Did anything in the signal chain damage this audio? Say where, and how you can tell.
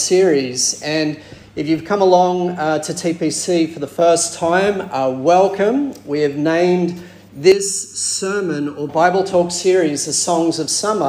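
Yes. From 7.52 to 8.89 s, one channel runs late by a little under a millisecond and is then summed with the other to mono, a channel delay (comb filtering) fault at the mix-down or playback stage. Anything common to both channels cancels at evenly spaced frequencies, with the first notch near 700 Hz and more above it. For those seconds the sound turns hollow and phasey, then returns to full body when the offset clears.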